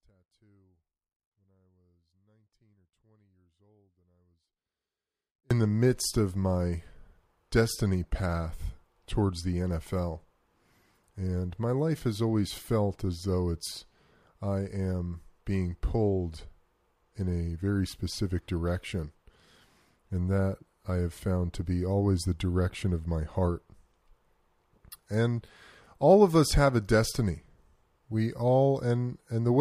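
From the very start until 5.51 s, only a faint residue remains, roughly 40 dB below the signal's normal level, then the speech returns abruptly at "the midst of my". This audio dropout to a faint residue was likely caused by signal loss upstream while the path after the break stayed live.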